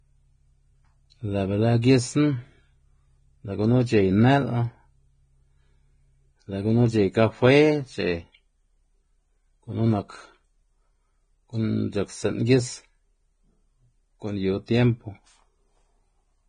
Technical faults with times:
0.00-16.48 Vorbis compression

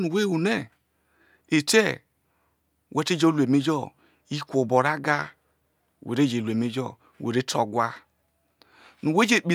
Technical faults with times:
none

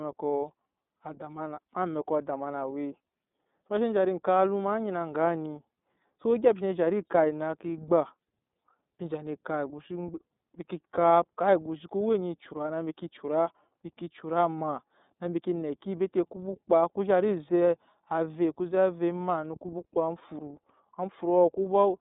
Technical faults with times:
0.00-22.00 iLBC codec

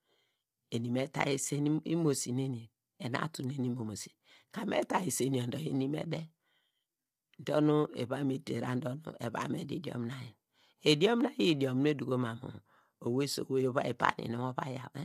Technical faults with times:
0.00-15.05 low-delay AAC compression

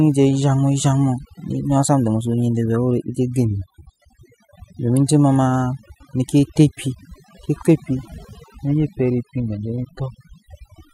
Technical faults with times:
0.00-10.94 overdone noise removal

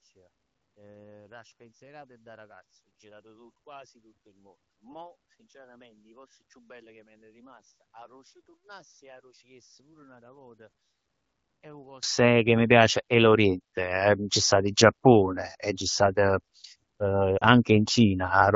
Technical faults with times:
0.00-12.03 one channel inverted
17.38-17.45 lost AMR speech frames

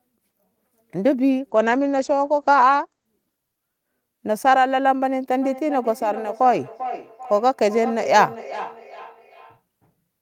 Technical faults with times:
1.51-3.89 call bitrate drop
5.42-9.62 feedback echo between two devices

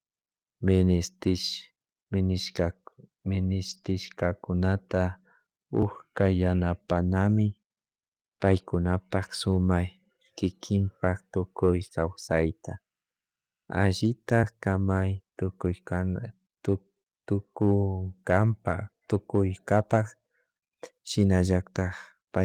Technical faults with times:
3.69-3.91 lost packet rebuilt from error correction
3.81-3.85 short concealed packet loss
5.82 dropped buffer (overrun)

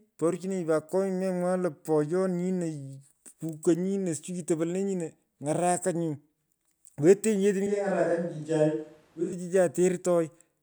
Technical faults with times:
7.67-9.32 switch to a distant microphone

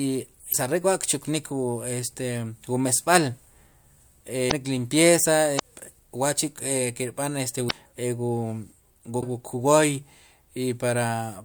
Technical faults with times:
0.49-0.55 damaged data in a compressed stream
4.48-4.53 damaged data in a compressed stream
5.56-5.60 damaged data in a compressed stream
7.67-7.72 damaged data in a compressed stream
9.18-9.23 damaged data in a compressed stream

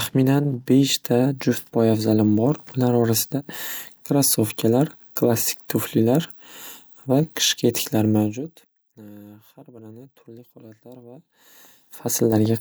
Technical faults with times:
none

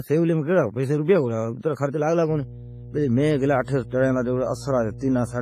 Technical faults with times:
0.00-5.42 WMA compression
2.27-5.42 mains hum
3.64-3.68 pre-echo

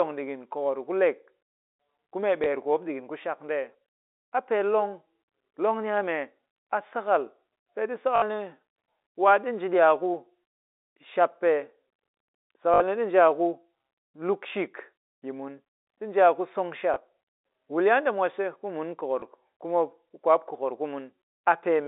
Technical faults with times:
2.44-2.46 packet loss with last packet repeated
8.16-8.22 packet loss with last packet repeated
12.74-12.80 packet loss with last packet repeated
16.94 packet loss with last packet repeated
19.20 packet loss with last packet repeated

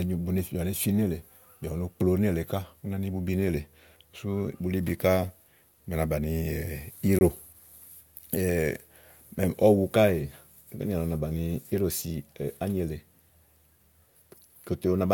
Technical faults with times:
7.19-7.21 gap between stream segments

